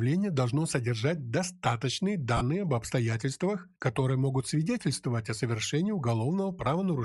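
A speech clip with a breathy, grainy edge all the way through, with the top end thinned and noise-filled, likely Bluetooth LC3 compression at something like 48 kbps with 10 ms frames. There are also lost LE Audio frames at 2.37–2.42 s and 6.64–6.66 s, where the sound smears into noise as the decoder reuses the last spectrum, fitting roughly four and two missing frames.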